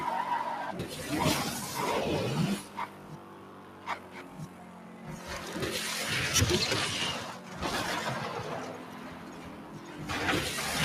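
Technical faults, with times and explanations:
Throughout: noise suppressor applied to sound. It treats steady content as noise, so gain swings by around 10 dB; the waveform envelope pumps and spectrogram tails fade unevenly.
2.62–5.07 s, 7.39–7.61 s, 8.77–9.94 s: sound cut by the noise suppressor. Sustained parts sink by about 5, 4 and 4 dB while onsets survive, leaving thinner, darker spectrogram bands.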